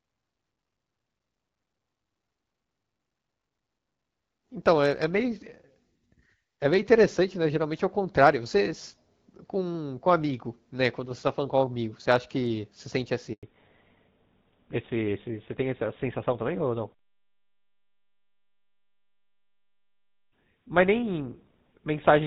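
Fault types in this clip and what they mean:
handover gap: The speech cuts out abruptly at 13.33 s and stays silent for about 100 ms before returning. The call was switched between networks and no speech frames arrived during that switch, so whatever was said in that tenth of a second is gone.
fallback to narrowband: From 13.43 s to the end the speech sounds duller and rougher, with nothing left above 4 kHz. The call left the HD Voice link and dropped to the older GSM full rate codec at 13 kbit/s, which cannot carry higher frequencies.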